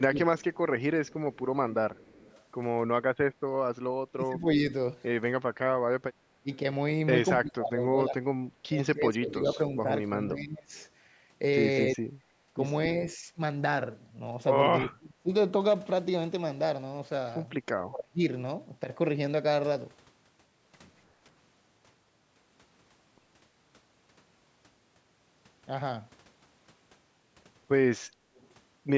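From 0 to 0.43 s the speech dips by roughly 20 dB in places. This is speech suppressed in double talk, likely the echo canceller ducking this talker while the far side spoke at the same time. The waveform envelope pinches inward and the spectrogram thins at the top. The same dips recur from 4.08 to 4.66 s (around 30 dB), through long stretches between 6.43 and 15.31 s (around 25 dB, about three seconds in total), and from 17.7 to 18.2 s (around 30 dB).

From 0.53 to 2.44 s a faint delayed copy trails the speech by 281 ms, roughly 30 dB down. This is an echo leak, likely loudspeaker sound that the far end's canceller failed to remove. On a spectrogram it appears as a weak, smeared duplicate of each syllable shifted right. It returns much louder from 9.29 to 10.85 s, roughly 15 dB below the speech at a 298 ms delay, and briefly from 28.35 to 28.48 s, very faint.

From 28.06 to 28.31 s the room background is background gated by the echo canceller, dropping about 14 dB while the loudspeaker plays. 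The noise floor on the spectrogram shows a short dark notch, and the sound snaps back afterwards.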